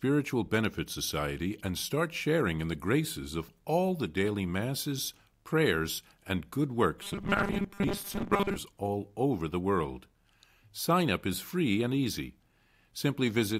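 From 7.02 to 8.56 s, after "masses prayers and good", the speech turns into a rigid 200 Hz metallic buzz: robotic sound from repeated short buffers, likely from audio arriving too seldom and about 5 ms being repeated most of the time.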